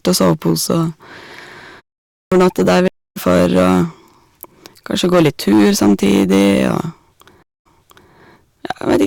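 Hard clipping runs through the whole recording. The speech reaches the output about 12 dB hotter than the chain can pass, so the loudest moments, around one sample in twenty, have their peaks sheared flat. Those squared-off tops throw extra harmonics high into the spectrum, and every stressed syllable carries a harsh, buzzy fuzz rather than occasional crackle. The distortion is constant, not tied to any single moment.

A clipped start after a pause comes at 2.12 s to 2.32 s. After a 0.39 s gap, the output path appears to have gone idle and needed time to wake and lock again. The first 197 ms of the returning speech is swallowed, so the phrase begins abruptly out of silence with its opening sounds missing.

A stream reconnect hits at 2.88 s to 3.18 s. The connection drops, leaving 280 ms of silence, and a fresh decoder picks up mid-stream roughly 300 ms further on, so a stretch of speech is skipped. 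A second stream reconnect at 7.43 s to 8.12 s brings 229 ms of silence, but here playback resumes 469 ms earlier, consistent with the server resending a burst, so a short stretch of speech is heard twice.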